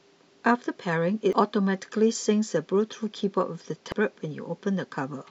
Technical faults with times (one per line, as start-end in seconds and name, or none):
1.33 damaged data in a compressed stream
3.92 damaged data in a compressed stream